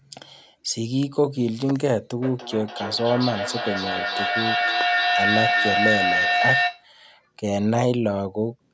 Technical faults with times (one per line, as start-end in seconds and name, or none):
2.22-6.89 feedback howl